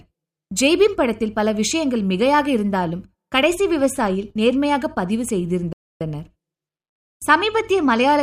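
A speech clip with one playback stall: at 5.73 s the sound cuts out mid-flow and stays silent for about 280 ms, resuming at 6.01 s. That's likely the player running dry of data or its thread getting blocked briefly.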